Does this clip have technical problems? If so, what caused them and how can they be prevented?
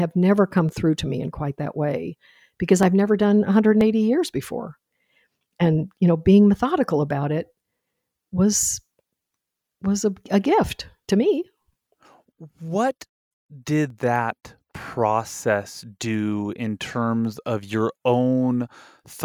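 Yes: sharp clicks at 0.69, 2.83 (after "quite that way because"), 3.81, 7.11, 8.53 and 13.9 s are likely dropped samples, with under a millisecond missing each time. Each shows as a waveform step and a thin vertical spectrogram line. Larger audio buffers and a stable clock prevent this.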